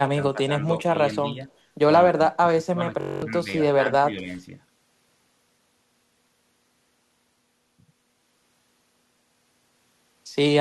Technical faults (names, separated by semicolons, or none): speech suppressed in double talk; system hang loop